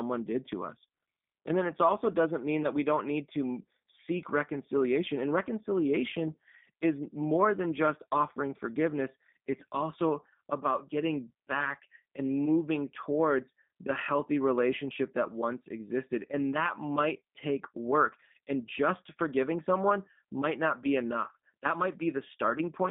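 Speech heard through the G.729 codec the whole way: band-limited to roughly 150 Hz to 3.6 kHz, with a rough, synthetic edge that fits an 8 kbit/s G.729A link.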